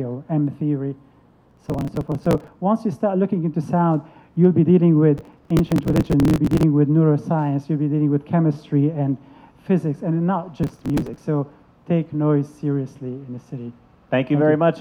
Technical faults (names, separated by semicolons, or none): processor overload crackle